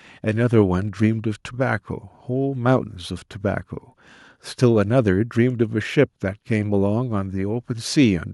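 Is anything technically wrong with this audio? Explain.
No, nothing technically wrong can be heard here.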